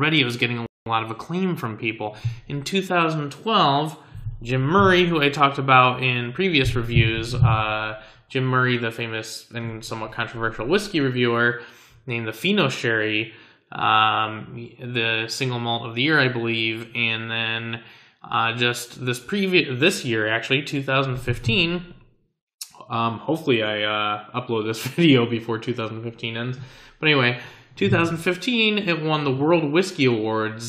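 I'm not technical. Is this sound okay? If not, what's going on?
No. A rebuffering stall at 0.66 s: the player ran out of downloaded audio, went silent for 0.2 s, then resumed exactly where it stopped.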